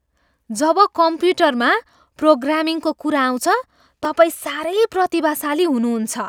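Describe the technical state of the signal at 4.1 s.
At 4.05 s a block of digital silence occurs: about 1.7 ms of the speech signal is replaced by zeros. The waveform drops straight to silence and back with no fade, so the two abrupt edges merge into a single brief tick or dip.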